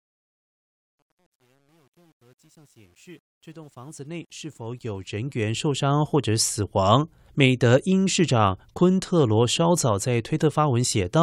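A speech recording with truncation distortion on the fade-in, from the start to 5.94 s. The fade itself rises to full level at 5.94 s. But the gain stage keeps too few bits and adds no dither, which fits a 10-bit word length. At low levels the waveform collapses into coarse square steps. The worst stretch runs from 0.0 to 4.32 s. There the sound turns gritty.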